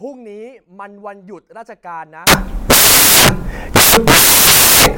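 From 2.27 s to the end, samples built from the wrong bytes turn the speech into loud broadband hiss. Low bits now dominate, filling the spectrogram broadly.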